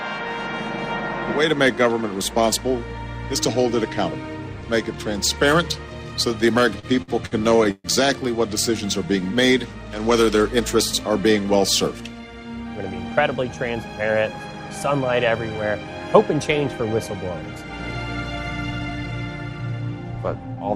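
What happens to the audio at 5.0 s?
Nothing goes wrong at 5.0 s; the audio plays through that moment intact, with no dropout, click or distortion.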